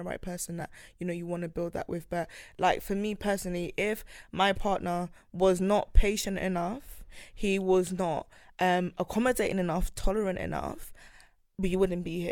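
A dropped compressed frame at 0.60 s in this speech clip, between "right person" and "you know you want", means compressed frames were skipped. About one 10 ms frame never plays, so the audio jumps ahead by about 10 ms.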